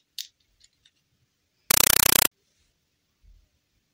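From 1.71 to 2.31 s there is a compressed stream played as audio. An encoded bitstream, likely AC-3, reached the output undecoded and was treated as samples. Each frame becomes a 5.33 ms noise burst then silence, repeating 31.25 times a second, heard as loud chattering static replacing the sound.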